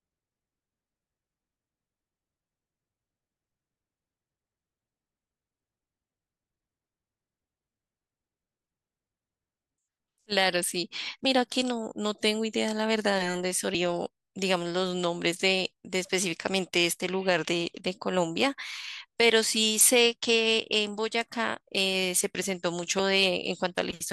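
At 11.25 s the speech jumps forward, consistent with compressed frames skipped. Roughly 200 ms of audio never reaches the output, which fits around seven 32 ms frames that were either absent from the stream or rejected by the decoder as corrupt. Playback resumes further along, so the phrase sounds clipped short.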